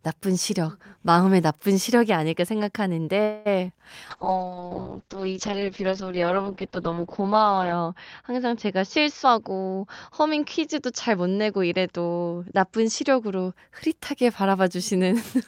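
It's a speech recording with a cluster of network trouble. At 3.23 to 3.48 s there's a call audio freeze: the last sound stretches into a fading buzz for about 0.22 s, then carries on with nothing lost, likely because packets stalled and the jitter buffer ran dry. Right after, at 3.68 to 3.71 s, a short concealed packet loss leaves a quick smear where about 20 ms never arrived and about 10 ms was patched over. From 4.11 to 13.60 s there's a call bitrate drop from 48 to 7 kbps, with the bandwidth narrowing from 20 kHz to 6 kHz, so the voice turns muffled and watery and bottoms out for about 3.6 s. Overlapping that, 9.23 to 12.21 s has a jitter buffer speed-up: the receiver trims pitch periods to run about 7% fast, shaving roughly a fifth of a second, so the speech sounds a bit hurried at unchanged pitch.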